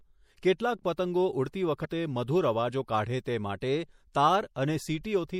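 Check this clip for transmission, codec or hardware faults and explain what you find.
Two faults are audible in this speech clip: lossy compression damage throughout, and one short decoding glitch.

Throughout the clip the treble is cut off and the quieter detail swirls and warbles, with s sounds turning metallic and attacks smeared. This is likely MP3 compression: starved of bits, the encoder drops the highest frequencies and lets weak spectral lines flicker on and off between frames. The damage is plainly audible, which fits a bitrate of around 64 kbps.

From 1.81 to 1.85 s, just after "કેટલાક પતંગો ઉડતી", a brief glitch marks damaged data in a compressed stream. Corrupted bytes made the decoder misread those frames, lose sync and jump to the next valid frame header.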